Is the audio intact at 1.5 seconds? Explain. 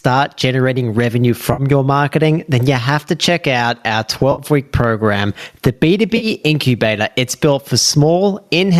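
No. Just after "generating revenue", from 1.53 to 1.62 s, there is AAC frame loss with concealment. About 50 ms of audio goes missing, which fits five lost frames. The decoder patches the gap from the last good spectrum, so the sound smears into a short, noisy, phasey blur before "your marketing then you" returns.

Gain pumping also runs through this moment, with a gain swing of roughly 15 dB. This is likely from excessive input gain held down by a fast limiter.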